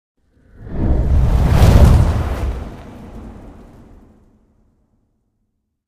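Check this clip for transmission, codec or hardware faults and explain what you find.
No faults can be heard in this audio. Nothing in it points to a problem anywhere between capture and playback.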